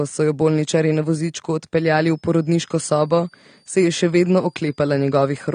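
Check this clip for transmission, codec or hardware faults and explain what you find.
Two faults are audible. The whole clip is dull and smeared, with nothing above 9.7 kHz and a plainly audible watery, fizzy edge on sibilants. That's likely AAC compression: AAC-LC at a low rate, which fits something around 32 kbps, lowers its cut-off and starves the upper bands of bits, so detail turns into swirling quantisation noise.

From 1.80 s, right after "jo bolničarji na vozičku", to the end, there's a switching supply whistle. It's a thin, high tone near 5 kHz that wanders between about 4.6 and 5.4 kHz and sits roughly 40 dB under the signal. A power supply's switcher is dropping into an audible burst mode and bleeding into the audio path.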